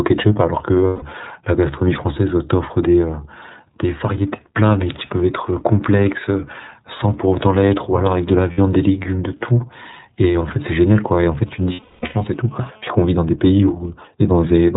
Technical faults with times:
0.00-14.76 iLBC codec
0.87-1.03 lost iLBC frames
8.52-8.59 lost iLBC frames
10.23-12.96 GSM phone buzz
11.73-12.15 lost iLBC frames
12.96-14.05 GSM signalling bursts

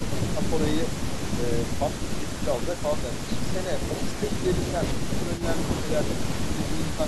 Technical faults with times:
5.36-5.44 echo leak
5.82-5.86 speech suppressed in double talk

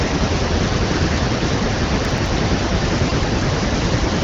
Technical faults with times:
2.05-2.28 processor overload crackle
3.10 repeated buffer

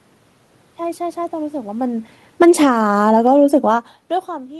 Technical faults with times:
1.72-3.35 automatic gain falling

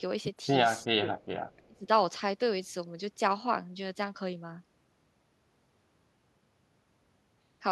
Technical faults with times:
0.85-1.10 speech suppressed in double talk
1.50-1.67 echo leak
1.57-1.88 speech suppressed in double talk

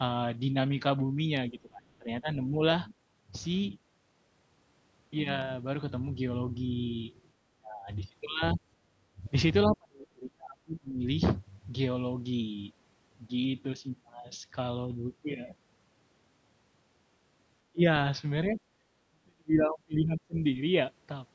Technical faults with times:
1.51-2.55 speech suppressed in double talk
1.88-1.94 other side's voice leaking through
7.39-7.89 speech suppressed in double talk
8.55-9.26 speech suppressed in double talk
9.67-11.03 speech suppressed in double talk
17.72-17.84 speech suppressed in double talk
18.48-20.35 speech suppressed in double talk

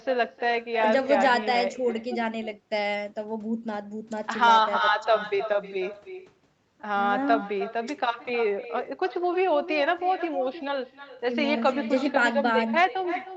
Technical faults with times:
0.00-13.37 echo with no canceller

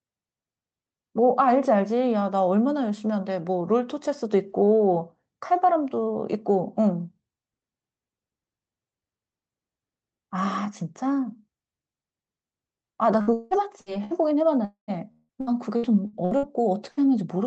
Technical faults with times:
13.21-14.14 repeated packet loss (robotic sound)
14.65-14.91 long network dropout
15.12-16.46 repeated packet loss (robotic sound)
16.91-17.00 burst of packet loss

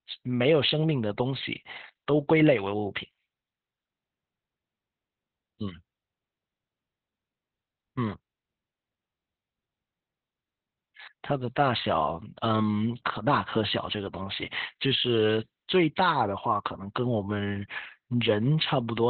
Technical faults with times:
0.00-19.10 Opus voice compression

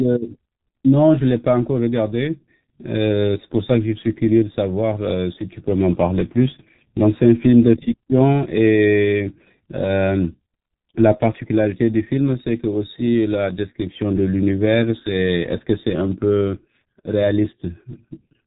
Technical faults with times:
0.00-18.47 G.723.1 codec

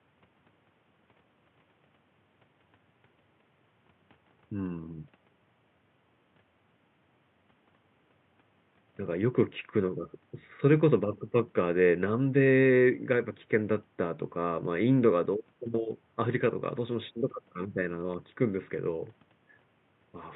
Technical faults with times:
none

